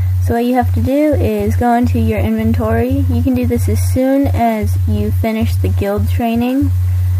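No technical faults can be heard in the audio.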